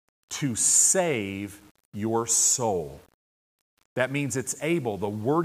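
No technical faults are audible.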